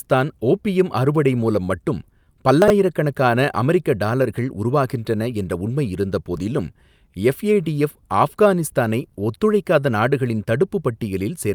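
Right through the speech there's clock drift between sender and receiver: the sending clock runs roughly 3 percent slow, so the receiver's buffer keeps running short. From 0.06 s to 11.24 s you get repeated timing corrections, with the receiver stretching playback to about 97 percent speed by repeating small slices. That adds up to around a third of a second, heard as a slightly lurching tempo with faint hiccups. At 2.62 to 2.70 s there's a short run of chunks out of order, with a 20 ms chunk landing three places late, and again at 6.36 to 6.40 s one lands a single place late. Each gives a quick jumbled flicker.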